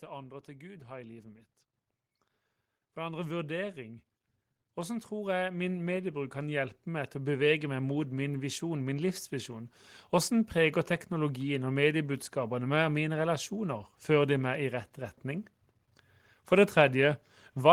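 Automatic gain rising occurs from 0.05 to 1.49 s and again from 4.61 to 9.77 s: the gain control judged the input too quiet and lifted its level, by about 4 dB and then about 10 dB, so speech and background swell together.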